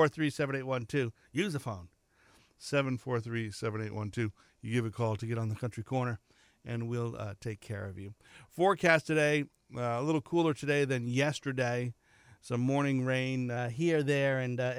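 Speech drops about a semitone (6.1% slower) from 2.85 to 5.21 s, just before "get on the country", and from 9.45 to 10.23 s, before "cooler today than yesterday". After "yesterday some morning rain" it jumps about a semitone (6.1% faster) from 13.57 s to the end. This is likely a drift correction step. Speed and pitch move together in one step and snap back, unlike wavering wow.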